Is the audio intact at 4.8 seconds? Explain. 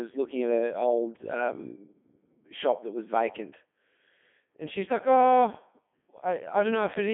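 No. The whole clip runs through a Codec 2 vocoder at 3.2 kbit/s, rebuilt from pitch and envelope as sine waves, so speech at 4.8 s sounds heavily robotic and buzzy.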